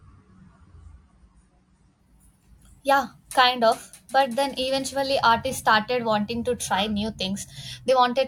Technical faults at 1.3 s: adaptive stream starting at a low bitrate

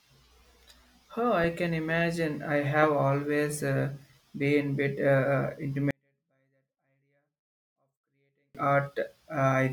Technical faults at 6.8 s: 24-bit alignment error (too quiet)

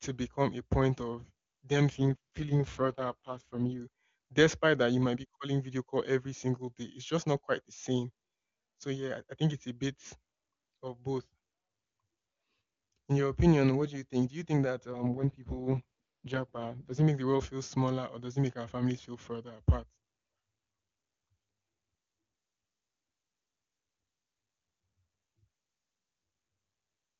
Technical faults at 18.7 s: none

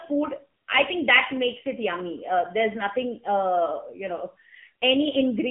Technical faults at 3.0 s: AMR narrowband mobile codec

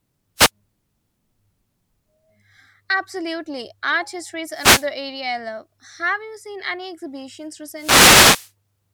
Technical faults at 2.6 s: none

